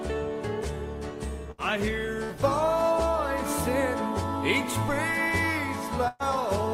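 At 1.51 s, 2.24 s and 6.08 s there are bursts of packet loss, filled for 66 ms, 57 ms and 119 ms. In each, the receiver stretched the last sound and faded it rather than going silent, so the gap carries a decaying held tone or hiss instead of a dead drop. Playback then jumps ahead, skipping about 60, 60 and 120 ms of audio. That skipped material, not a click or mute, sets it apart from a simple dropout.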